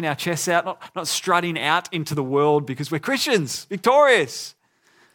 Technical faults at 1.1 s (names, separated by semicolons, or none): none